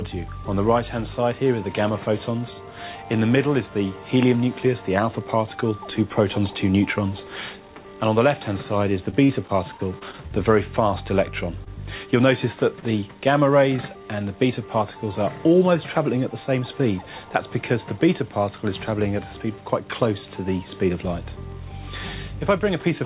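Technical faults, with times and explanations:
9.10–10.32 s, repeated packet loss (robotic sound): seven separate dropouts fall within this stretch, the longest about 41 ms, adding up to about 167 ms of filled-in audio, or 14% of the span. Each time data failed to arrive, the receiver stretched the last received sound to cover the hole, and the next hole came before the sound had settled. The rapid succession of patches gives a choppy quality with fragments missing.
11.64–11.68 s and 12.80–12.84 s, short concealed packet loss: each time, about 20 ms of audio never arrived in time, and the receiver covered the hole. It did this by carrying the preceding sound forward, following its pitch where it was tonal or using shaped noise where it was not, and then crossfading back into the real signal. The result is a brief smear or wobble at each point. The audio sits on a telephone-grade path with nothing above 4 kHz.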